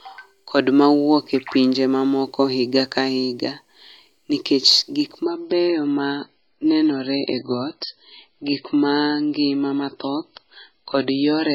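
At 5.24 s, just after "nikech gik", the speech abruptly loses its top end and stays that way to the end. That's an adaptive stream at a lower bitrate: the sudden dullness, with nothing above 5.5 kHz and swirly artefacts, fits a jump from roughly 128 kbit/s MP3 down to around 16 kbit/s, with no gap at the switch.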